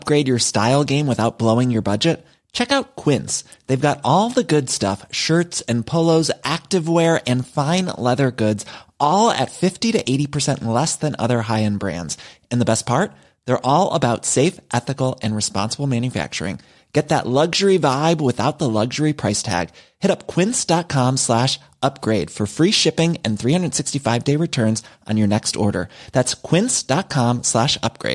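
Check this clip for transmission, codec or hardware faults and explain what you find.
No faults detected.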